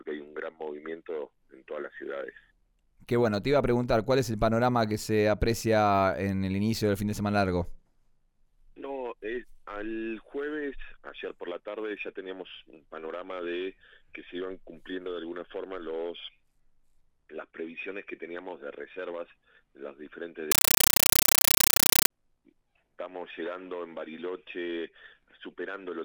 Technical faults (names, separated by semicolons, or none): compressed stream played as audio